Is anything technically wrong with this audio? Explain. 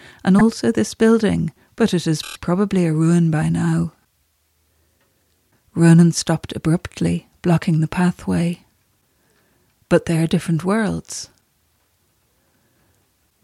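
Yes, there are repeated frames in two spots. At 0.38 s, just before "also this building but", one 26.1 ms block plays twice, a quick stutter. Then from 2.21 to 2.37 s, between "this building but it" and "probably a ruin by", a block the same length plays five extra times, a longer stutter that adds about 130 ms. The 26 ms size points to a single compressed frame being re-sent, so the decoder just replays it.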